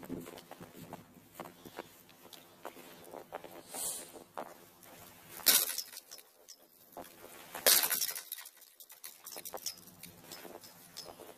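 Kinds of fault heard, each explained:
Planar audio read as interleaved, throughout: each 23.2 ms block, which fits 1024 samples per channel, is unpacked as alternating pairs, so its left half and then right half play at double speed, lifting the sound an octave with a 43.1 Hz flutter.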